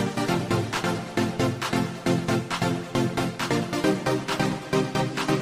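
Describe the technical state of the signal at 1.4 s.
At 1.4 s the signal is intact, with no dropout, distortion or other technical fault present at that point.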